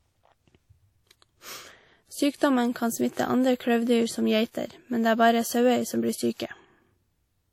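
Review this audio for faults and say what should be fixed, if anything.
Across the whole speech clip the high end stops abruptly at 17.9 kHz, and the detail beneath it has the smeared, swirly texture of a lossy encode made at a much lower rate than the file's size suggests. On a spectrogram the energy ends at a flat ceiling at 17.9 kHz, with patchy, blocky gaps through the upper bands. The waveform looks normal. This is likely low-bitrate audio saved at a high bitrate. An earlier low-rate encode, consistent with something around a 48 kbit/s WMA stage, was re-saved as a larger MP3. That adds size but cannot restore what the first codec threw away. To fix it, go back to the original uncompressed or highest-quality source and encode once from that, rather than re-encoding an already compressed file.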